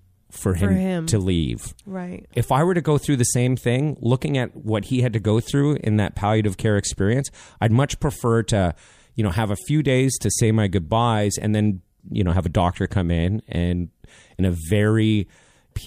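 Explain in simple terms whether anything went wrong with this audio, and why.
Nothing went wrong; this recording has no audible faults.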